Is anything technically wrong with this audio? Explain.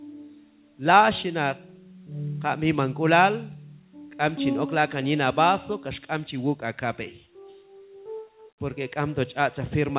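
No, nothing here is technically wrong; the audio simply stops at 4 kHz, which is just what you'd expect from an ordinary call path and fits a standard G.711 mu-law phone codec.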